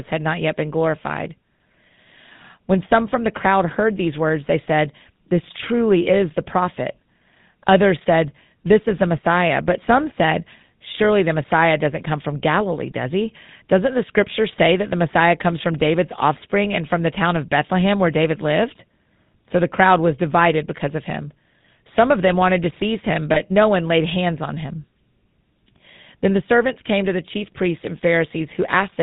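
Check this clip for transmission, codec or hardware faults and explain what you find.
Two faults are audible: a codec coloration present for the whole clip, and one brief dropout near the end.

The whole speech clip is carried through the GSM full-rate codec, and the damage is plainly audible. The codec models the vocal tract and excites it with a coarse, regularly spaced pulse train, consistent with the 13 kbps full-rate mode. Nothing above 4 kHz survives, so speech sounds band-limited, buzzy and gravelly.

A lost GSM frame occurs at 23.34 s, between "wanted to seize him" and "no one laid hands". It lasts about 20 ms, which fits one missing frame. The decoder fills the gap by repeating the previous frame's parameters, so the sound briefly becomes a rough, metallic ring.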